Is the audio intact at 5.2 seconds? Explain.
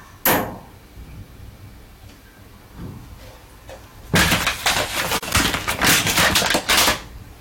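No. From 5.18 to 5.23 s there's a gap at a join of encoded pieces: a silence of about 42.5 ms with smeared edges. Two separately encoded chunks were butted together without trimming the encoder's start-up delay and end padding, and then the sound resumes where it stopped.

That gap sits inside a long stretch of hard clipping, from 4.14 to 6.94 s. The level there is driven about 41 dB past what the chain can pass, so the peaks are sliced flat. The flat tops pile on high harmonics, and every loud moment comes out as harsh fuzz.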